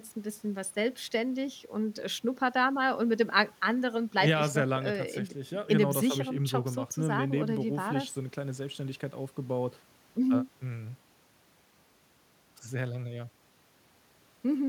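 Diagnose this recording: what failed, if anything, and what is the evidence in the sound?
Nothing failed; no faults heard.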